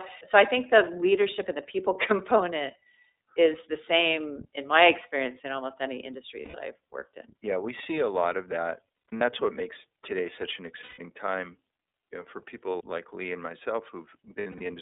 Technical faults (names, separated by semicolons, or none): iLBC codec; lost iLBC frames